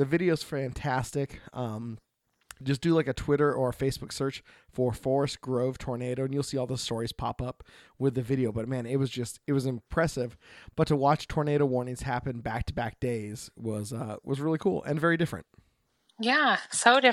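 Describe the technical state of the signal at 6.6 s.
At 6.55 s, between "tornado and you'll" and "all the stories pop", the speech carries one sharp click, most likely from dropped samples. Only a handful of samples, around a tenth of a millisecond, seem to be missing, so the waveform jumps straight to a later value and leaves a thin vertical line across the spectrum. Unlike a dropout, no sound is audibly lost: there is no gap or hole, just the instantaneous tick.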